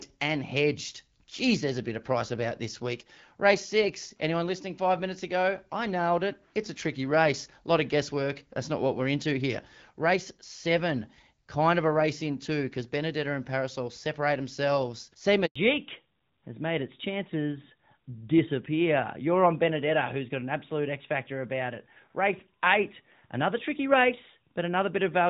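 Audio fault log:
15.46–15.56 s, handover gap: speech cuts to silence for 100 ms while the call switches networks and no frames arrive, so that stretch of speech is lost.
15.56 s to end, fallback to narrowband: all content above 4 kHz disappears, leaving duller, rougher speech. The lighter wideband coding before this point suggests a drop from HD Voice to narrowband AMR near 12.2 kbit/s.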